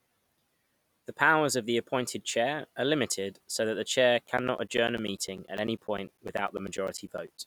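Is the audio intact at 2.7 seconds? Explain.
Yes, the audio is intact at 2.7 seconds, with no fault there.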